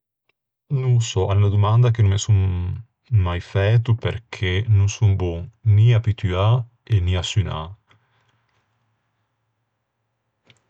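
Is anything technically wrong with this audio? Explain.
Yes. Regular clicks occur in the speech every 1.39 s, from 1.34 to 9.71 s. These are clock drift buffer slips. The likely cause is two mismatched clocks, roughly 100 ppm apart, dropping or repeating a few samples at each slip.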